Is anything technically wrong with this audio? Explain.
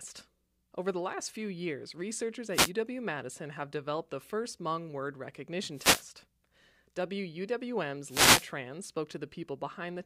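Yes. The speech is hit three times by wireless microphone noise. The first comes at 2.52 to 2.71 s, just after "last few years researchers". The others follow at 5.73 to 6.09 s and 8.03 to 8.53 s. Each is a short swish of static laid over the speech. The radio link from an analogue FM microphone is fading as reflected signals cancel. Receiver noise then rises into the gap and partly masks the speech.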